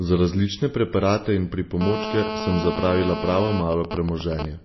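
Throughout the speech, everything above 5.8 kHz is missing and the sound has a watery, swirly quality, likely from MP3 compression at a low bitrate, around 24 kbps. Starved of bits, the encoder cut the treble and dropped weak frequency lines, which flicker on and off. A spectrogram shows a hard ceiling at 5.8 kHz with patchy, blinking detail below it.

From 1.81 to 3.60 s, just after "različne preparate in", a GSM phone buzz appears: a harsh, raspy drone at 217 Hz, about 6 dB below the speech. A nearby phone in a call transmits in steady bursts, and the audio circuit rectifies them. The spectrogram shows evenly spaced horizontal harmonic lines stacked upward from 217 Hz.

From 3.61 to 4.45 s the buzz turns into GSM signalling bursts, even ticks with a longer 217 Hz buzz twice a second, slightly quieter than the speech. The phone's user has gone silent in the call, so only sparse groups of bursts are sent. 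On the waveform these appear as separate clumps of spikes.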